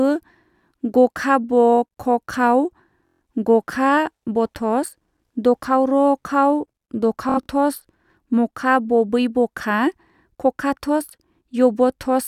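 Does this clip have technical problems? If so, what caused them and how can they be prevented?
Yes. At 3.07 to 3.21 s, and again at 7.29 to 7.48 s, the speech breaks into a rapid machine-gun buzz. This is Bluetooth stutter: packets arrived late or were lost, so the receiver kept replaying its last short slice until data resumed. About 0.14 s of speech is lost in the first burst and 0.12 s in the second, where the repeats are spread in runs of up to 70 ms. Keeping the devices close and away from crowded 2.4 GHz traffic prevents it.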